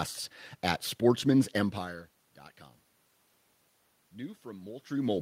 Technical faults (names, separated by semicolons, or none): automatic gain rising